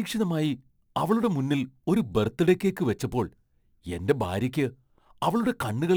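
A speech recording carrying crude rate conversion from start to finish. A faint gritty fizz rides on the voiced and sibilant parts, sitting very roughly 30 dB below the speech and rising and falling with it. The pattern fits a 48 kHz to 44.1 kHz change made by simply dropping the nearest samples, with no anti-aliasing or interpolation filter. The irregular drop pattern produces inharmonic tones unrelated to the voice's pitch.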